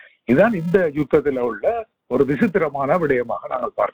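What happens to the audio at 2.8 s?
At 2.8 s the filter is restarted on every block, as it is throughout the clip. It drops its state and starts each block from silence, leaving a small transient at every boundary. This sounds like a 375 Hz buzz, which fits a 128-sample block, and it rises and falls with the signal's level.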